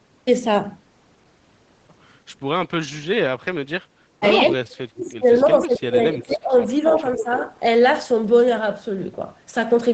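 From 4.52 to 5.25 s the speech dips and breaks up, falling by about 35 dB at its deepest over roughly 0.7 s in total. This is speech suppressed in double talk, likely caused by both ends talking at once: the echo canceller could not tell the near talker from the loudspeaker return and attenuated everything. Inside that stretch, at 5.07 to 5.11 s, a faint echo leak appears, a copy of the far-end signal delayed by 269 ms and sitting about 35 dB below the speech.

A second suppression runs from 5.41 to 6.67 s, with the level pulled down by about 25 dB and roughly 1 s of speech affected. At 6.18 to 6.24 s an echo leak arrives 317 ms late, about 20 dB under the speech. The same 317 ms echo is more prominent at 6.88 to 7.01 s, only about 10 dB down. A shallower suppression, about 10 dB and roughly 0.2 s in total, spans 6.9 to 7.44 s. A final 317 ms echo scrap at about 10 dB below the speech falls at 7.18 to 7.22 s. 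In each of these echo leaks, the canceller on the loudspeaker side likely left part of its microphone pickup in the signal and sent it back as a short, delayed copy. The whole clip is band-limited to 8 kHz by the Opus call path, which is expected.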